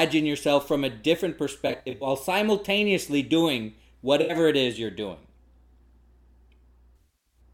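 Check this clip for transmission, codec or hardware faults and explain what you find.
AAC frame loss with concealment occurs three times, at 1.67–2.07 s, 4.21–4.35 s and 6.96–7.40 s. The decoder rebuilds the missing frames from the last good spectrum, so the speech turns smeared, noisy or phasey rather than dropping to silence or clicking. Losses are scattered across the first and last patches, with runs up to about 70 ms and 100 ms.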